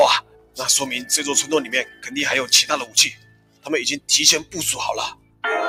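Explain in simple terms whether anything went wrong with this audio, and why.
A noise suppressor designed for speech was left running on this sound. It mistakes steady tones and fading tails for noise, so the level pumps and thins.

The sound is cut by the noise suppressor at 0.21–0.59 s, 1.84–2.08 s, 3.13–3.68 s and 5.11–5.44 s. Held portions sink sharply while sudden attacks survive.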